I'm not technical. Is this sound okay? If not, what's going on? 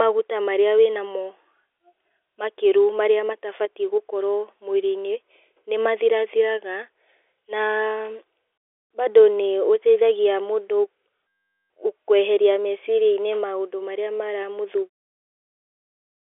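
Yes, this is ordinary telephone-quality speech carried over G.711 telephone coding, which limits it to the narrow phone band of roughly 250 Hz to 3.5 kHz, and it ends with a deliberate smooth fade out at about 15 s.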